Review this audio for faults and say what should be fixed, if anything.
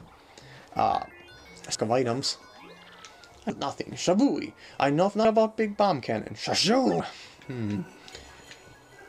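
Audio missing between chunks: jumps at 1.75, 3.5, 5.25 and 7.0 s, each losing around 300 ms, likely from 2 s chunks dropping audio at every handover. Fix it by double-buffering so recording continues while each chunk closes.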